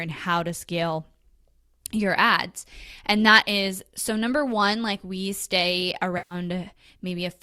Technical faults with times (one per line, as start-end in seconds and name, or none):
6.17-6.35 AAC frame loss with concealment